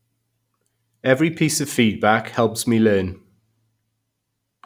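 Throughout, crude rate conversion by linear interpolation, fitting a 32 kHz to 48 kHz step, adds a gritty fizz about 25 dB down, seen as faint inharmonic spectrogram lines.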